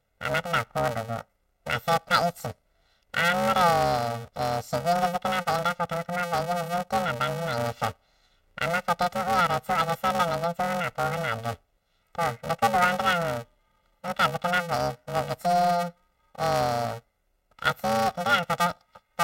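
From the start of the speech to the end, the audio shows planar audio read as interleaved. Each short block stores its left-channel samples and then its right-channel samples, but playback treats that layout as alternating left-right pairs. Each block's left half and then its right half play back at double speed, which keeps the overall pace correct. With blocks of about 2.9 ms, which fits a 128-sample block, the result is a robotic buzz at about 345 Hz laid over everything, with no clear octave shift.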